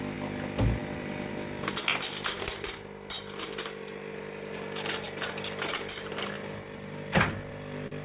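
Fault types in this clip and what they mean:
Clock drift between sender and receiver: The sender's audio clock runs about 3 percent slower than the receiver's, so the jitter buffer keeps draining. The receiver must repeatedly pad the stream, which leaves small, unevenly spaced timing hiccups throughout the sound.
Repeated timing corrections: To stay in step with the slower sender, the receiver keeps repeating short pieces from about 0.15 s to 7.51 s, adding roughly a fifth of a second overall. The sound plays at 97 percent speed.
Short stall from a late packet: Near the end a packet arrived late and the jitter buffer ran empty, so the receiver held the last sound for 44 ms, from 7.87 s to 7.93 s. Nothing is lost, but that moment lingers with a faint buzz or dip.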